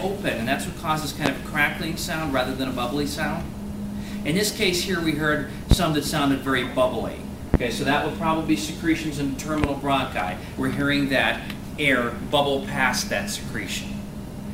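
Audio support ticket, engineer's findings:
Loud pop, four single events: 1.26–1.30 s, 5.71–5.75 s, 7.54–7.58 s, 9.64–9.67 s. Each about 20 dB above the programme, the last nearer 25 dB. Sound continues unbroken underneath, so not a dropout or buffer gap. Likely cause: an intermittent connector, switch or static discharge injecting a voltage step, shaped into a short thump by the downstream stages. Irregular spacing argues against a periodic clock or buffer fault.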